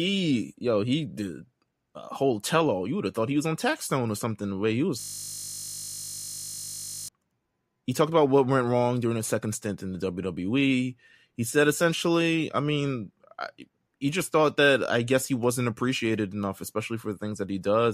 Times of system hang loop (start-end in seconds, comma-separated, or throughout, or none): 5.00-7.08